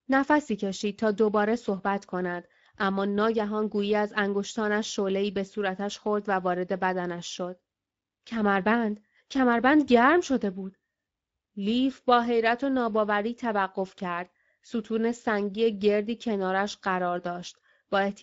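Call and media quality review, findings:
Speex codec artefacts, whole clip. Speech rough and hoarse. Noisy grain on every phrase, plainly audible. Nothing above 7.7 kHz. Probable component: Speex encoder in the call path. Mechanism: CELP coding with too few bits to model the excitation, so the residual comes through as hiss and roughness. Sound fits a wideband mode around 17 kbps. Action: check negotiated codec and quality setting.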